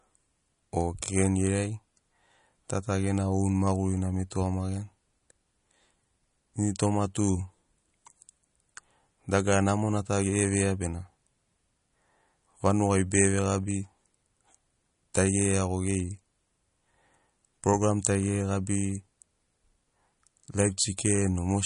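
Throughout this speech recording, a low-bitrate encode, likely MP3 compression at roughly 40 kbps, has starved the coder of bits. The encoder has dropped the treble entirely, so nothing reaches above 10.6 kHz, and it has thrown away weaker frequency lines that then flicker in and out between frames. The damage is plainly audible: the sound has a watery, swirling quality, s sounds turn chirpy and metallic, and sharp onsets smear.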